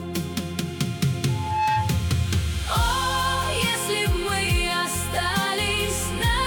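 Loudspeaker feedback squeal runs from 1.28 to 2.10 s. The microphone is picking up its own loudspeaker, and at 863 Hz the loop gain passes one. That tone swells for under half a second into a steady whistle that ends up a few decibels louder than the surrounding sound.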